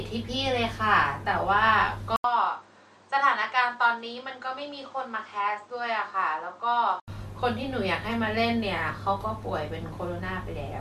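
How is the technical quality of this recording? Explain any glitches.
From 2.16 to 7.08 s the speech turns duller and about 5 dB quieter, with nothing above 8.8 kHz, a new noise floor some 40 dB down, and an 80 ms gap at the switch. This is likely an input switched to a poorer device, whose narrower band and own noise take over mid-recording.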